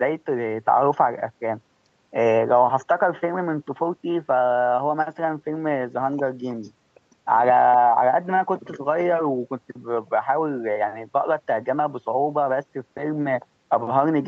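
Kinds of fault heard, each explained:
No faults heard in this speech.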